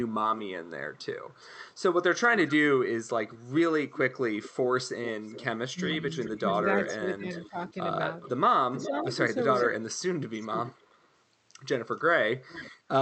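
Echo leak runs from 0.47 to 4.5 s: a faint copy of the speech trails the original by about 414 ms, sitting roughly 20 dB down. The likely cause is a far end on a loudspeaker whose echo canceller failed to strip what its microphone picked back up, returning that residue down the line. A second stretch of echo leak, from 5.04 to 11.07 s, is stronger, at roughly 15 dB below the speech, with a delay of about 420 ms.

Inside that stretch come three bouts of speech suppressed in double talk, at 5.72 to 5.78 s, 6.4 to 7.56 s and 8.88 to 8.95 s. The main speech dips in brief pieces, by around 20 dB at the first, about 15 dB at the second and around 10 dB at the third, totalling roughly 0.44 s of affected sound. Both sides were talking at once, and the canceller likely could not tell the talker from the returning echo, so it pulled down both.

Echo leak returns from 11.98 to 12.71 s, again roughly 15 dB under the speech and now delayed about 426 ms. 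Throughout, the Opus call path caps the audio band at about 8 kHz.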